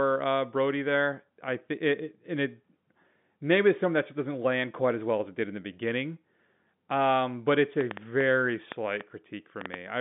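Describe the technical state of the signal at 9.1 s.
A train of clicks, likely interference or a faulty connection injecting pulses, spans 7.81 to 9.75 s: about ten irregular pops, roughly four per second, standing well above the telephone-band speech.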